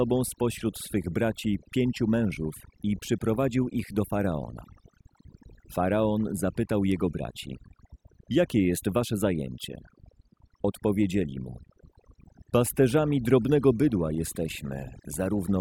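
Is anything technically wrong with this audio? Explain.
Yes. Throughout the speech, overdone noise removal is audible: a noise reducer set too aggressively pulls individual frequency bands down or out whenever they sit near its noise estimate, taking quiet speech detail too, leaving near-silent gaps with twinkling specks.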